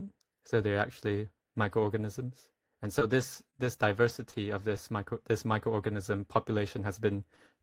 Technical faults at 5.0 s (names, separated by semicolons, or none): scattered short gaps